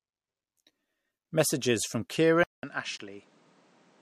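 At 2.44 s the sound drops out for about 0.2 s, then comes back duller, a few dB quieter, with nothing above 9.7 kHz and a new bed of noise sitting roughly 30 dB under the speech. That combination of a short silence, a narrower top end, a level dip and a different noise floor is the signature of an input switched to a poorer device, likely the system hopping to another mic or a headset's call profile mid-recording. It stays that way to the end.

Then at 2.97 s there's a hard-edged hole of about 20 ms, a clean little dropout with abrupt edges rather than a fade. That's a gap between stream segments: the timestamps of two adjacent chunks don't quite meet, leaving roughly 19.5 ms uncovered, and the player pads it with silence. Its position fits segments about 2 s long. Nothing is actually missing from the speech, just stretched apart by that sliver of dead air.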